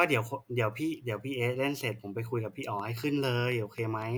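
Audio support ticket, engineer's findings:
Train of clicks, 2.80–4.03 s: regular ticking at 4.07 per second, roughly seven pulses, peaking near speech level. Waveform shows evenly spaced, similarly shaped spikes; spectrogram shows thin full-band vertical lines. Likely nearby-equipment interference or a faulty connection or power supply.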